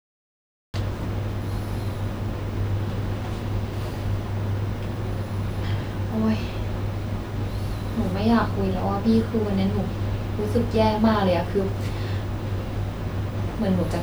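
From 0 to 0.74 s there is only digital silence, and at 0.74 s the speech cuts in abruptly, already partway through a sound. This is a cut-off start: capture began late, so the opening of the utterance was never recorded. It differs from a dropout because nothing was playing beforehand and then lost. Unlike a gate or fade-in, the level doesn't rise. The onset is simply missing, with no natural attack.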